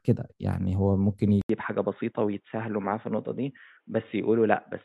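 Speech, and at 1.41 s it drops out for about 80 ms and comes back dull and boxy, with nothing above 3.8 kHz, a few dB quieter, and a new faint noise floor. That's likely the input switched to a poorer device, through to the end.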